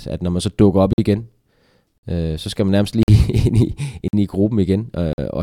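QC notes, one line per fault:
0.93–0.98 s, 1.98–2.03 s, 3.03–3.08 s, 4.08–4.13 s and 5.13–5.18 s: gap between chunks. The audio was handled in 1.0 s chunks, and 50 ms of silence sits at every join, likely from codec padding or each chunk starting late. No speech is lost, but it breaks off at a steady rhythm: just after "man så dukker op", just before "øh så skal man", and just after "så skal man nærmest".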